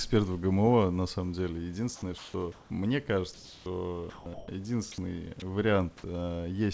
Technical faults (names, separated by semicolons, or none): comfort noise in place of the background; sound dropped by the voice detector